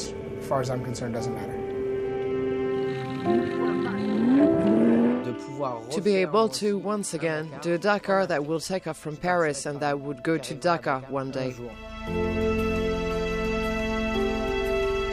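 From 3.33 s to 5.07 s there is a time-stretched section. The audio suddenly runs at about 1.89 times its normal pace while the pitch stays where it was, then drops back to normal speed at 5.07 s. Over this stretch the sound is rushed. The likely cause is software compressing that portion to fit a shorter length, preserving pitch by discarding short slices of the signal.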